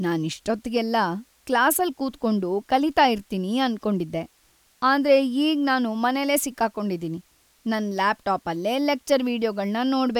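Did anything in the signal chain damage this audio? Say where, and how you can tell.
No, nothing stood out on listening to this speech recording that would point to damage at any stage of the signal chain.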